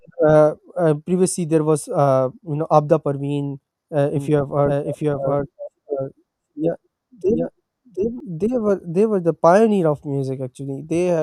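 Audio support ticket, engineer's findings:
Doubled audio track, 4.16–8.20 s: second full-band copy trailing by roughly 0.7 s, about 5 dB down, starting and stopping abruptly. Likely a slower parallel capture path mixed in. Starts just before "they were they were".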